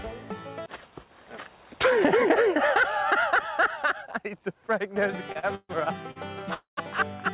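At 5.32 to 5.37 s and again at 5.39 to 5.45 s come two short stalls from a late packet. Each time the jitter buffer ran dry and the receiver held the last sound for about 31 ms and then 38 ms until the data arrived. The sound briefly hangs with a faint buzz, then carries on from the same place with nothing lost. At 5.55 to 5.71 s there is a call audio freeze, likely caused by packets held up in transit. Here the held sound runs for about 142 ms, decays, and ends in roughly 30 ms of silence before the audio resumes where it stopped. That fade into silence is what separates a freeze from a stall, where the sound is only stretched. Another short stall at 6.11 to 6.18 s holds the sound for about 46 ms. A second freeze at 6.54 to 6.79 s is longer: about 234 ms of filled audio, with around 110 ms of it gone silent. Throughout, the band stops at 4 kHz, which fits a narrowband G.711-type call path.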